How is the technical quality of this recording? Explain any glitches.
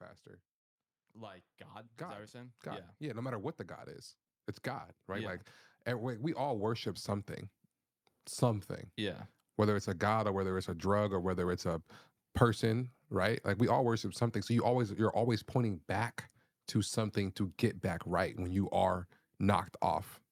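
Two stretches of automatic gain rising stand out: from 1.13 to 3.67 s, ending just before "is it's", level climbs about 8 dB; from 6.03 to 7.36 s, about 5 dB. The gain control judged the input too quiet and ramped up slowly, so voice and background noise swell together, unlike compressor pumping, which tracks individual syllables.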